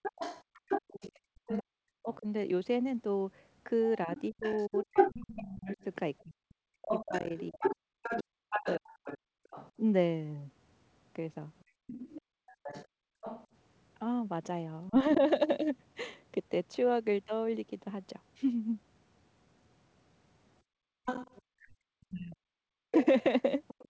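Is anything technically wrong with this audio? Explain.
Yes. The speech carries clear echo-control faults on a call link.

Other side's voice leaking through runs from 0.02 to 15.12 s and again from 21.05 s to the end. A second voice sits under the talker, only a few decibels quieter, around 5 dB down. It likely comes from a loudspeaker feeding back into the microphone. The echo canceller failed to strip it out. So the far side stays audible across most of the clip.

Speech suppressed in double talk appears from 1.13 to 15.22 s and from 21.6 s to the end. The talker's level dips while the other voice is present. At its worst it falls by roughly 40 dB, nearly silent. In the first stretch the dips add up to about four seconds. Both sides were likely talking at once. The canceller could not tell them apart and pulled everything down.

Background gated by the echo canceller occurs from 12.22 to 13.21 s and from 20.62 to 21.05 s. 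The room sound drops away abruptly, by about 38 dB at the deepest. The gaps last about half a second and 0.4 s. The canceller clamped the microphone while the loudspeaker played. The ambience returns once it releases. The second gate ends just as the leaked voice resumes. Nothing sounds above 8 kHz, which fits a G.722 call path.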